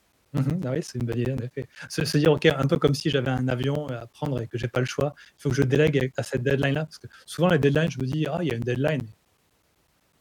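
Something in the system is blocking the USB bus or the audio driver every 0.125 seconds, causing periodic USB or driver dropouts from 0.12 s to 10.13 s. Each time, around 10 ms of audio goes missing and is replaced by silence, about seventy gaps in all. In the speech, this comes through as a steady ticking at eight per second, audible whenever the voice is present and falling away in pauses.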